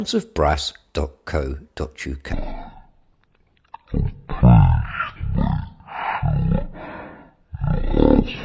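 Speech with a wrong sample rate from 2.33 s to the end, starting near "a look at the": 44.1 kHz audio played at 16 kHz, running at 0.363 speed, about 17.6 semitones low.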